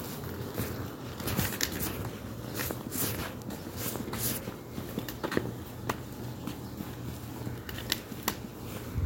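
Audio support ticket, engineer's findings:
No faults found on listening to the sounds in the clip. Nothing to attribute to any component in the chain, so no action on the audio path.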